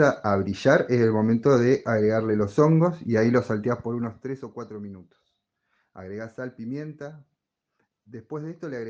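Zipper noise runs from 3.48 to 4.58 s, where the level drops by roughly 15 dB in coarse unsmoothed steps, around fifty a second. Each jump leaves a tiny click, so a fast ticking buzz rides on the sound while the level falls.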